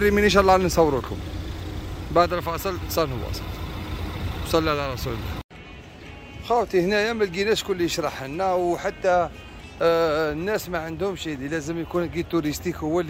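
Nothing stood out as a technical fault on listening to this audio.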